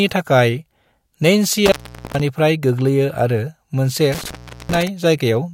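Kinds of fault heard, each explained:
Intermittent contact: speech cuts out twice, for 0.43 s and 0.39 s, crackling at the edges with faint hiss, as a loose connection momentarily opens.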